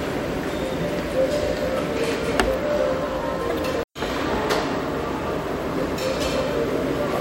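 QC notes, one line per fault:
3.49–3.52 s and 6.21–6.24 s, broken MP3 bit reservoir: each time the sound skips forward abruptly, and about 30 ms of garble, a chirp, a burst of noise or a short hole, fills the join. The likely cause is MP3 frames missing from the stream. The frame after each gap reaches back into the bit reservoir for data it stored in earlier frames, reads bytes belonging to some other frame, and decodes roughly one 26 ms frame of nonsense before the audio resyncs.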